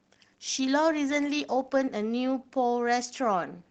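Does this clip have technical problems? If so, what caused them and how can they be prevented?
No, there are no technical problems in this clip.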